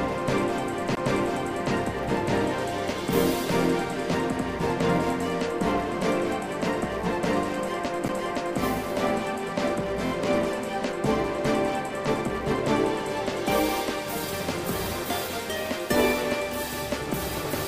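Throughout the clip a filter restarted on every block, losing its state and starting each block from silence. The small onset transient at each block boundary produces a steady buzz at 172 Hz whose loudness tracks the signal's level, which fits a 256-sample block.

At 0.95 s there is a CD skip: a tick and a brief mute of around 15 ms, after which playback resumes from a different point. A jolt or disc flaw made the laser jump to another turn of the spiral.

From 10.06 to 10.10 s, repeated frames cause a short stutter. The same 23.2 ms stretch plays two extra times, adding 46.4 ms, which points to a single compressed frame being duplicated.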